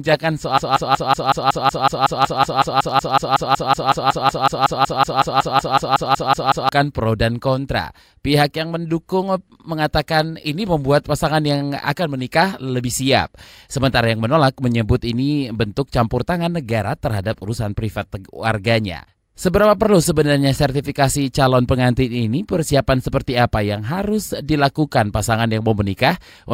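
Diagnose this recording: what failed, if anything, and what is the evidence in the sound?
A broken-record loop runs from 0.58 s to 6.69 s in the speech. One fragment of about 186 ms repeats exactly, back to back, 33 times, before normal audio resumes just ahead of "pro dan kontra". The stage is most likely a stalled stream or playback buffer that kept re-sending the last block it held. Whatever should have played during those six seconds is gone, replaced entirely by the repeating fragment.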